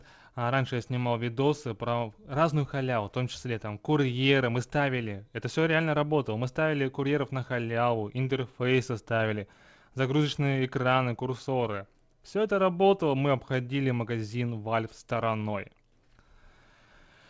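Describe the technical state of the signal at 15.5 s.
At 15.5 s the signal is affected by clock drift between sender and receiver, with the sender's clock running about 2% slow, so the jitter buffer keeps draining. This produces repeated timing corrections from 0.04 to 16.86 s: the receiver inserts or repeats short pieces, adding roughly 0.4 s overall and playing at about 98% speed, heard as faint hiccups and a slightly unsteady tempo.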